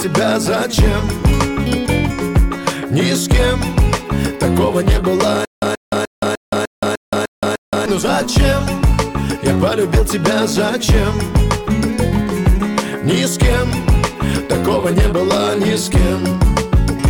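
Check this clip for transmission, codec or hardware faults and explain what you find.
One transmission fault is audible, a stutter with silent gaps. From 5.45 to 7.86 s, a stalled stream likely kept replaying its last 130 ms fragment eight times, each followed by 171 ms of digital silence, losing the audio in between.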